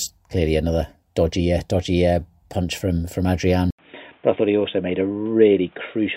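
A speech recording whose input was likely switched to a poorer device at 3.71 s, just after "uh punch from from": an 80 ms silence, then until the end the speech turns dull and boxy with nothing above 3.8 kHz, at unchanged level, over a faint new background noise.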